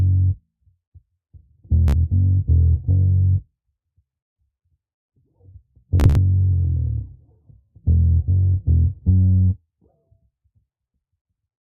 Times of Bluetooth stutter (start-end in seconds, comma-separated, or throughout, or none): 1.88-1.95, 6.00-6.18